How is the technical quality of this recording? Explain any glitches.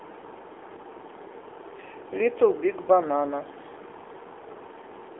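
The recording is heavily band-limited, with audible codec damage across its full length.

Throughout, the AMR narrowband mobile codec rebuilds the speech from a pulse-excited vocal-tract model with nothing above 3.7 kHz, leaving a thin 300 Hz to 3.5 kHz line band and a plainly buzzy, synthetic quality consistent with a low bitrate around 7.4 kbps.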